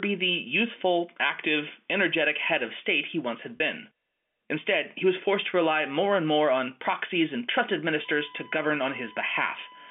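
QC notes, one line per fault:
3.57 to 3.60 s, packet loss with pitch repetition: after "state he once had", 30 ms drops out. Repeating the last pitch period bridges it with a brief buzzy hold.
8.05 s to the end, USB whine: a steady 1 kHz tone, about 20 dB under the speech, enters after "on proxies and trusted". USB frame current leaks into the telephone-band audio.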